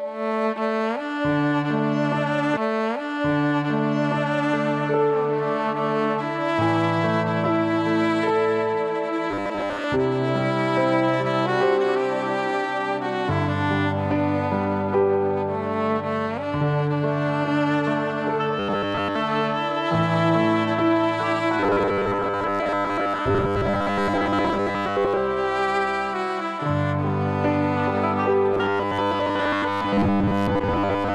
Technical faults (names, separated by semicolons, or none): robotic sound from repeated short buffers